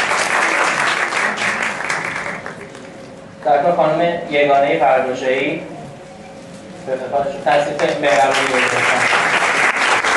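Nothing technical goes wrong anywhere in this clip, so there's no fault to point to at any moment.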